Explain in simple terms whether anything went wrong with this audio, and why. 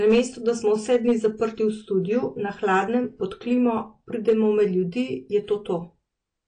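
Yes, two things went wrong. The speech was most likely squeezed hard by AAC compression, a format that shrinks files by throwing away detail it guesses you won't miss. Squeezed this much, it throws away too much. Everything above about 9.9 kHz is simply gone, so the whole recording sounds dull and muffled, and the compression damage is plainly audible as a smeared, watery texture on the sounds that remain.

The second problem is hard clipping. At two moments the sound was louder than the recording chain could hold, so the loudest parts were chopped off flat instead of being captured in full. That adds a harsh, crackly fuzz. It happens from 0.07 to 1.27 seconds, the heavier of the two, and again from 4.28 to 4.62 seconds, right after "pod klimo", where it is milder.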